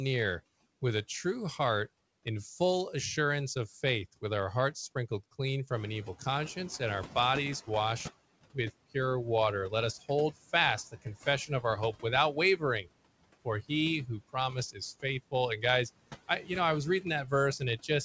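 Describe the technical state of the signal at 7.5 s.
At 7.5 s the noise suppressor is still catching up. The room noise jumped by about 12 dB at around five and a half seconds, and the suppressor's noise estimate lags behind it. From 5.71 s to 8.11 s, between "our hearts sprinkled clean" and "with pure water", the noise is cut by only about 12 dB instead of about 20 dB. It comes through louder and then sinks over roughly 2.4 s as the estimate adapts.

Throughout the clip, noise suppressor artifacts are also present. The suppressor lowers the bands it judges to be steady noise, frame by frame, by about 20 dB. The residue dips between words and rises under the speech. The call codec's band limit, with nothing above 8 kHz as fits G.722, dulls the top of all of this.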